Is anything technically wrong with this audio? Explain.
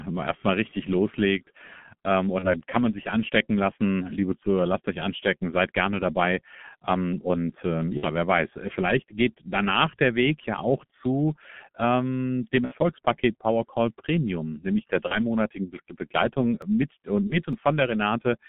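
Yes, there are three kinds of faults.

G.723.1 codec, throughout: this low-rate telephony codec, running at 6.3 kbit/s with a 150 Hz to 3.4 kHz band, leaves the speech heavily muffled and hoarse, with smeared consonants.

VoIP packet loss concealed by the speech codec, at 2.39–2.51 s (30 ms lost), 7.97–8.09 s (60 ms), 12.65–12.74 s (60 ms), 15.08–15.17 s (30 ms) and 17.27–17.37 s (30 ms): the decoder extends its last pitch and filter while fading the gain, so each gap turns into a brief buzzy tone or coloured noise that fades. The speech stays weak for a moment after each gap.

Dropped buffer (overrun), at 16.62 s and 17.53 s: a small forward jump in the sound, skipping a couple of milliseconds and then a few. The likely cause is samples being overwritten before they were read, so the audio on either side is spliced directly together.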